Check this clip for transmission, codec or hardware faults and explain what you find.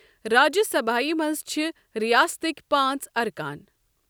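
Nothing wrong can be heard anywhere in this speech.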